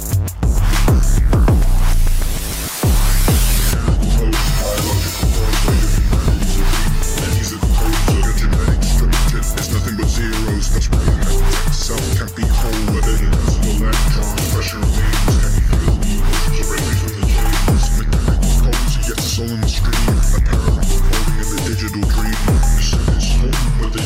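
No technical faults can be heard anywhere in this audio.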